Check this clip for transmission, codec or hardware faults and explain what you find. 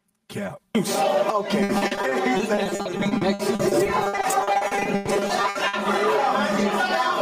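Three faults are present: comb filtering and gain pumping throughout, plus a long stretch of packet loss in the middle.

Channel delay (comb filtering) runs the whole clip: one channel lags roughly 5 ms, so summing cancels evenly spaced frequencies from about 100 Hz upward. The result is a fixed, hollow tone. Unlike flanging, these notches never sweep.

Gain pumping is also constant. The gain swings about 10 dB, pulled down on each loud sound, likely from excessive input gain driving a fast limiter, so loud and soft parts sit closer in level and the sound is squashed. Unlike steady compression, the level moves with each loud sound.

Repeated packet loss (robotic sound) runs from 1.63 to 5.75 s. Dozens of gaps, the longest 120 ms, are patched by extending prior sound, concealing roughly 30% of the span. This makes a choppy sound with pieces missing, unlike a single dropout.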